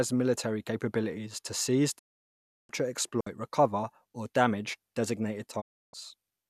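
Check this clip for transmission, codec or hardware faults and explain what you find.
Three dropouts turn up in this speech, two of one kind and one of another.

From 1.97 to 2.71 s, right after "military capabilities to seize", there's a digital broadcast dropout. The receiver stopped getting good frames and muted until clean ones arrived, so about 0.7 s of programme is simply gone, which fits roughly 29 frames at 24 ms each. The sound fades out over about 20 ms and comes back later. The same thing happens from 5.60 to 5.95 s after "recover or damage designated", with 0.31 s lost.

At 3.21 to 3.27 s, just before "recover or damage designated", there's a digital wireless dropout. The radio link lost too much data for a moment and the receiver muted with a very short fade. You hear a 60 ms hole of near silence, and no noise burst before or after it. It's much shorter than the broadcast gaps, just a brief clean blink in the audio.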